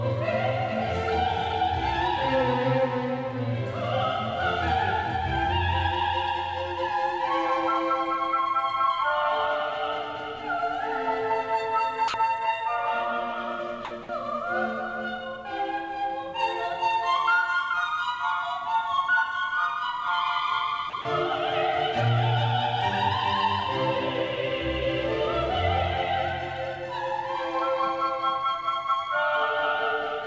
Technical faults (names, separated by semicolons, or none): doubled audio track; sound dropped by the voice detector